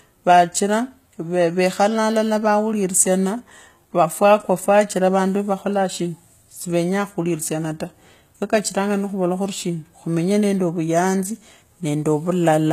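Speech, with HE-AAC compression throughout: nothing above 14.9 kHz, and the top end sounds copied up rather than real, so the s sounds go gritty, likely a very low bitrate around 20 kbps.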